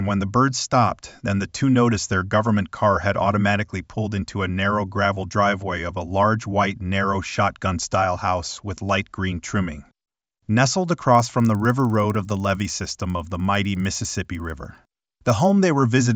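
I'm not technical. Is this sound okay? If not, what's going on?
No. From 11.15 to 15.5 seconds a steady ticking, 20 per second, sits under the sound. That's a resampler restarted on every block: the audio was converted in 50 ms chunks, each slightly wrong at its edges. Unlike random crackle, these ticks are evenly spaced and stop during silence.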